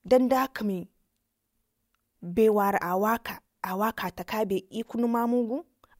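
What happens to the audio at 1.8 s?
Nothing goes wrong at 1.8 s; the speech continues through that moment without any dropout, click, distortion or other audible fault.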